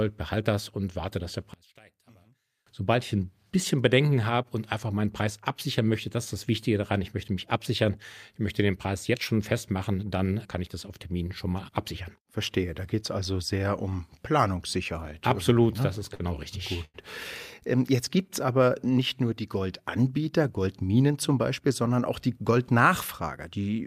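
From 1.54 to 2.67 s, after "und warte dass der" and before "sobald ich ein bisschen", the speech drops by about 30 dB to a faint residue. The likely cause is one channel inverted, so the shared centre content cancels when the channels are summed to mono. On a waveform the envelope collapses to a sliver. A spectrogram shows the low end and voice harmonics almost wiped out.

Between 15.53 and 16.22 s, repeated stalls (stutter) break up the speech. Late packets left the jitter buffer empty five times, and the receiver stretched the last sound each time. About 94 ms was filled in, or 14% of the span, with the longest gap 50 ms. The speech drags and catches. A spectrogram shows short, smeared, repeated frames.

At 16.85 to 16.96 s, a short stall from a late packet holds one sound for about 92 ms before the speech resumes from the same point, with a slight buzz or dip. A spectrogram shows a flat, frozen strip of harmonics, and the waveform shows a repeated, slightly dipping cycle.

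From 17.96 to 18.70 s, just before "nicht nur die", a jitter buffer slow-down repeats pitch periods to rebuild the buffer's reserve. This adds 58 ms and plays at 93% speed with the pitch unchanged. Sounds stretch out. The spectrogram shows elongated, evenly repeating harmonic stretches.

From 20.67 to 21.71 s, before "sondern auch die", a jitter buffer speed-up trims excess delay by cutting short pitch-period pieces. Roughly a tenth of a second is removed, and the speech runs at 109% speed with the pitch unchanged, sounding hurried. Syllables look compressed on the spectrogram, and tiny seams show in the waveform.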